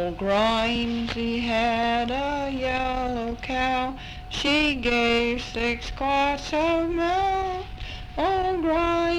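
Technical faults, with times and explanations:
4.46 s and 7.99 s, damaged data in a compressed stream: each is a brief chirp or blip, lasting only about 14 to 16 ms, that cuts across the audio and is gone. Part of the compressed data at those points arrived wrong, with bytes lost, zeroed or overwritten. The decoder misread the affected frames, lost its place in the stream and had to hunt for the next valid frame header before it could resume.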